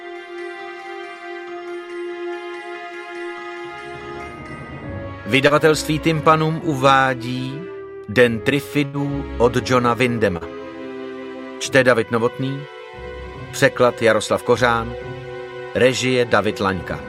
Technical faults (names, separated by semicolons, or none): short concealed packet loss; burst of packet loss